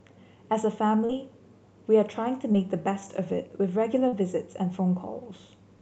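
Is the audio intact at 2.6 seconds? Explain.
No. Just before it, from 2.52 to 2.56 s, short concealed packet loss leaves a smear. About 20 ms of audio never arrived in time, so the receiver stretched the preceding sound to bridge it and blended back. Unlike a dropout, there is no silent gap, only a brief wobble.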